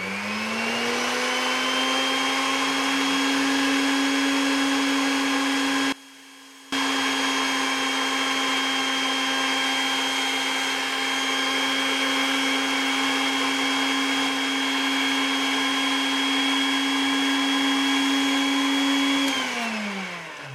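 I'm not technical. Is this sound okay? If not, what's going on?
No. From about 5.92 to 6.72 seconds the sound suddenly drops away to a faint trace, then returns. This is likely one channel inverted: one side of the stereo is flipped, so when both sides combine, what they share cancels out.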